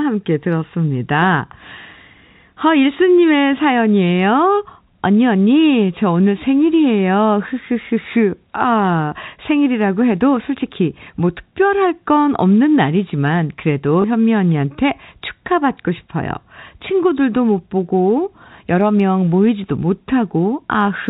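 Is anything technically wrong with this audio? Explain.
Yes. At 14.02 to 14.04 s there is packet loss with the last packet repeated. One 20 ms packet went missing and the receiver replayed the previous one to fill the gap. The replayed block seldom lines up with the pitch cycle, and a small blip sounds rather than silence, which is what separates it from a plain dropout. The speech is carried in G.711 A-law telephone coding at 64 kbps, which keeps everything under 4 kHz.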